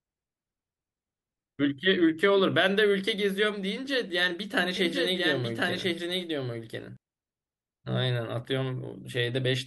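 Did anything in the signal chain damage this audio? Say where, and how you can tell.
Yes. From 4.77 to 6.97 s a doubled audio track appears: a full-band copy trails the speech by about one second at roughly equal level, starting and stopping abruptly with no decay. On a spectrogram the pattern repeats one second later. This is likely a duplicated capture path or editing error.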